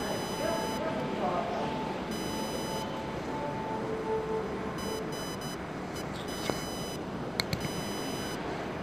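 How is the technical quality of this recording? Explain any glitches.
The technical quality is poor because of one persistent fault. Computer activity noise runs through the whole clip. A chirping buzz near 1 kHz sits only about 10 dB below the sound. It comes from processor or graphics load disturbing the shared audio ground.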